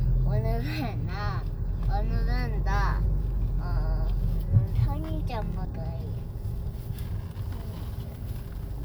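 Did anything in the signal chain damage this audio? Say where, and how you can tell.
Yes, at the codec stage: compressed frames were skipped at 4.75 s and again at 5.65 s. At each point the sound jumps forward, losing about 300 ms of material, which points to a run of around ten 32 ms frames that were either missing or rejected as damaged by the decoder.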